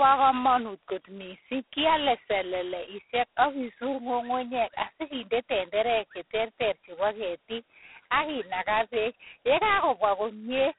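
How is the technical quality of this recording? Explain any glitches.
The quality is poor, held back by one codec fault running through the whole recording. Throughout, G.726 ADPCM coding limits the speech to a telephone band of roughly 300 Hz to 3.5 kHz, with nothing above 3.9 kHz. The heavy, rasping hiss that rises and falls with the speech level fits the 16 kbit/s mode: only 2 bits per sample code the prediction error, so quantisation noise tracks the signal.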